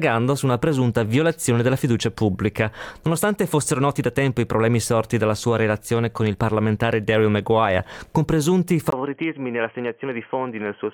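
At 8.90 s the sound breaks off for about 20 ms, then returns duller and boxier, roughly 5 dB quieter, with a faint new background noise sitting well below it, and stays that way to the end. This is most likely the input switched to a poorer device. On a spectrogram, everything above 3.2 kHz vanishes after 8.90 s. The waveform shows a brief flat gap at the switch, followed by a visibly smaller envelope.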